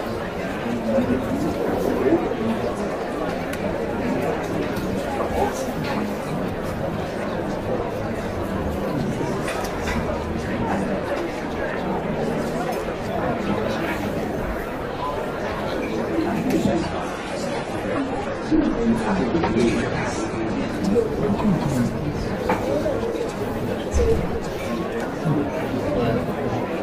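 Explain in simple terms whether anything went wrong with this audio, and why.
From 16.69 to 20.69 s the adaptive stream dropped to a lower bitrate: the sound suddenly goes duller and grainier, losing its sparkle above 12.3 kHz, then snaps back.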